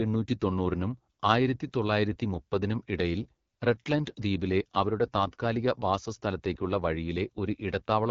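From start to finish the speech has passed through the AMR wideband (HD Voice) codec at a very low rate, and the plainly audible damage points to the 8.85 kbit/s mode. At that rate the pulse-driven model of the vocal tract is too coarse to follow the voice closely, so the speech comes out rough and raspy. Nothing remains above 7.5 kHz, and the top band above 6.4 kHz is only shaped noise, not the real detail.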